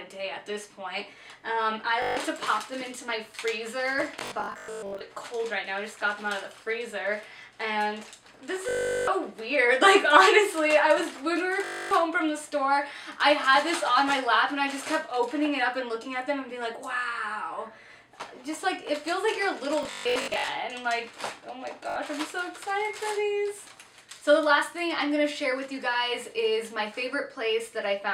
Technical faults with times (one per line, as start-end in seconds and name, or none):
2.02-2.17 Bluetooth stutter
4.19-5.01 Bluetooth stutter
8.69-9.07 Bluetooth stutter
11.64-11.91 Bluetooth stutter
19.83-20.48 Bluetooth stutter
21.90-21.96 Bluetooth stutter